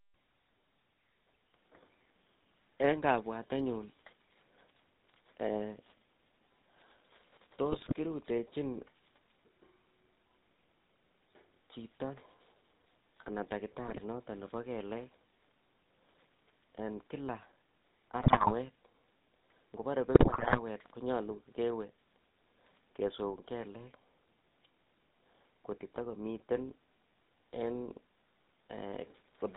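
Throughout, the speech has a buzzy, gravelly roughness, with nothing above 4 kHz. This is GSM full-rate codec damage: the coder models the vocal tract and drives it with a sparse, regularly spaced pulse train, which fits a 13 kbps full-rate link.

GSM bit errors cause squawks, pops and gargling at 7.72 to 7.94 s, 13.87 to 14.01 s, 18.20 to 18.53 s and 20.14 to 20.60 s. Corrupted filter, pitch or gain values briefly warp the spectrum or inflate the level.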